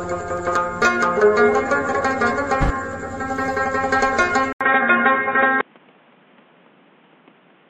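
Around 4.53 s the audio drops out for about 80 ms, then comes back duller and boxier, with nothing above 3.8 kHz and a faint new noise floor well under the signal, though the level stays put. That's likely the input switching to a poorer device, lasting to the end.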